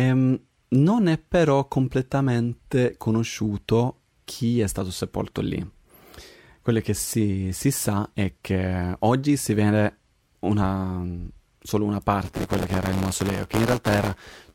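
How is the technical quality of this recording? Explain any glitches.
The recording has one glitch near the end. From 12.25 s, right after "vede una solo una", to the end, buffer tearing replaces each buffer period with audio about 10 ms old. The result is a robotic 172 Hz buzz, consistent with a 256-sample buffer. On a spectrogram it shows as evenly spaced vertical lines, and the waveform shows a hard step at every join.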